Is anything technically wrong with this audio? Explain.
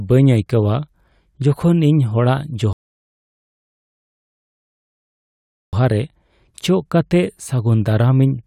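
Yes. A rebuffering stall runs from 2.73 s to 5.73 s in this speech clip. The player used up the audio it had already downloaded and had to pause until more data reached it. The speech drops abruptly into silence for 3 seconds, then picks up exactly where it stopped, with nothing skipped or repeated. No content is lost, but the gap adds 3 seconds to the running time.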